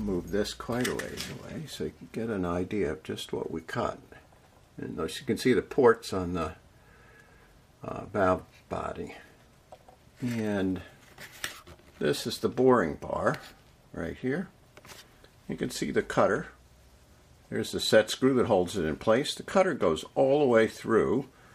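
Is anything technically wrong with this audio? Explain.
No, nothing technically wrong can be heard here.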